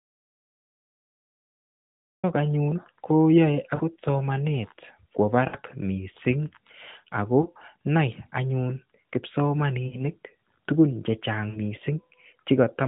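Speech over a narrowband mobile link, with its top cut at 4 kHz and a light buzz that fits AMR-NB at about 12.2 kbps. The clip opens inside an audio dropout to silence that is already running and lasts until 2.24 s. This is silence with no room tone at all, not a quiet pause on the line. That points most likely to the input feed being lost while the encoder kept writing empty samples. Whatever came before 2.24 s is simply absent. Lost AMR speech frames then appear at 3.76–3.82 s, 5.48–5.57 s, 7.42–7.47 s, 9.88–10.02 s and 11.50–11.58 s. Unlike the dropout, these gaps are not hard cuts to nothing. The decoder stretches the last good sound, so each one smears or warbles and sags in level before the voice returns briefly thin. Their lengths of roughly 20 to 60 ms fit one to three missing 20 ms frames.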